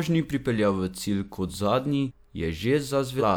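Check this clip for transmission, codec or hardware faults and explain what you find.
Two codec dropouts are audible. Compressed frames are skipped at 2.07 s, just after "cilj kot zadnji", and again at 3.18 s. Whole 46.4 ms frames go missing, so the speech jumps ahead roughly 0.3 s, then about 0.7 s.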